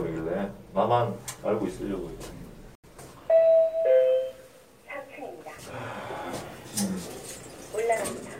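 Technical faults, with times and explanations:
2.75–2.89 s, digital broadcast dropout: the sound cuts or quickly fades to silence for about 0.14 s, then resumes further along. The receiver muted after frames failed to decode, a gap that fits roughly two lost frames, and whatever was transmitted then never arrives.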